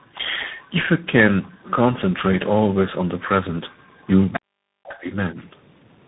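Throughout, tandem speech coding leaves the speech rough, muffled and warbly, with nothing above 3.8 kHz. This points to roughly three speech codecs in a row, ending in CVSD.

From 4.32 to 4.40 s, the other side's voice leaks through as a scrap only a few decibels below the talker, likely residual loudspeaker echo.

From 4.37 to 5.08 s, speech is suppressed in double talk: the voice drops by about 40 dB for roughly 0.7 s.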